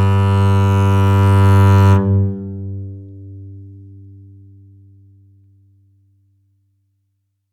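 No technical faults can be heard anywhere in this music clip. Nothing in it points to a dropout, glitch or other failure in the audio path.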